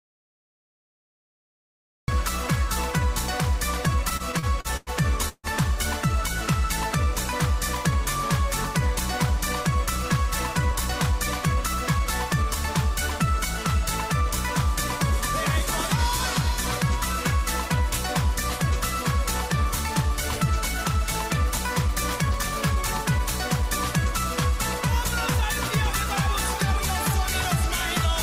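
The input was most likely lost from the very start, so an audio dropout to silence holds until 2.08 s: pure silence with no room tone, then the sound begins abruptly.

From 4.09 to 5.47 s, late packets repeatedly drained the jitter buffer. Seven repeated stalls were filled by stretching the previous sound, the longest for 150 ms, making the audio stutter and drag.

Twice, from 10.71 to 12.44 s and from 21.50 to 24.07 s, an overfull buffer triggered a jitter buffer speed-up. Trimming short pitch-period slices, about 70 ms and then about 100 ms in total, runs the sound 3% faster at unchanged pitch.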